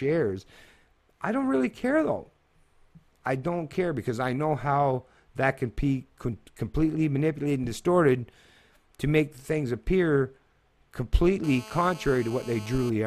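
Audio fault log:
11.44–12.90 s GSM phone buzz: a nearby 2G handset on a call transmits in bursts 216.7 times a second and the audio circuitry rectifies them, giving a steady, hard, raspy 217 Hz buzz full of harmonics, about 19 dB below the sound, unrelated to it.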